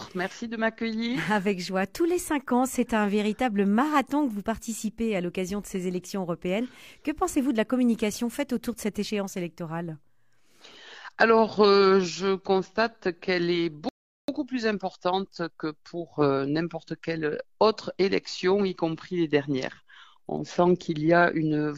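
At 13.89 s the sound drops abruptly into silence, then picks up at 14.28 s exactly where it broke off, with nothing skipped. This is a rebuffering stall: playback exhausted its downloaded audio and waited for more, adding 0.39 s.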